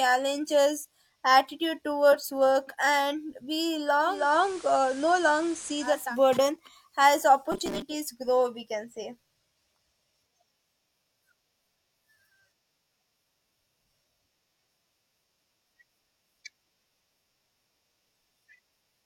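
At 4.01 s, right after "towards work and we", the digital radio blends to analogue FM. The receiver lost its digital stream. It cross-fades to the FM broadcast over about 0.37 s. Hiss rises, sitting roughly 20 dB under the speech. The level shifts by about 2 dB. At 6.17 s the receiver blends back to digital, and the hiss clears.

From 7.52 to 7.82 s the speech turns into a rigid, metallic buzz at 200 Hz. It still follows the words loosely. This is robotic sound from repeated short buffers, likely caused by audio arriving too seldom. The player repeats the last 5 ms of sound to fill the gaps. That 5 ms loop sets the fixed 200 Hz pitch. Roughly half the real audio in this stretch is skipped.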